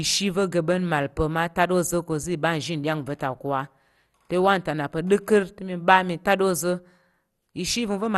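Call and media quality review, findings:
MP2 compression, throughout: speech dull and gurgling, nothing above 12.2 kHz; likely MPEG Layer II sub-band coding starving upper bands, which fits roughly 64 kbps.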